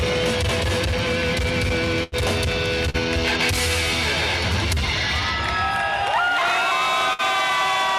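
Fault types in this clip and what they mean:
Burst of packet loss: at 2.03 to 2.14 s and again at 7.13 to 7.21 s, several consecutive packets failed to arrive in time, leaving gaps of about 80 ms and 60 ms. The receiver bridges each hole by extending the last received sound and fading it down, so the sound stalls into a held, dimming tail before picking up further along. A short stretch of the original audio is skipped each time.
Short concealed packet loss: at 2.90 to 2.96 s, about 40 ms of audio never reached the decoder. The receiver covered the dropout by continuing the preceding sound for a few hundredths of a second and then crossfading back into the real signal. The repair is brief enough to come across as a small smear or wobble rather than an obvious gap, with that fragment of the original sound lost beneath it.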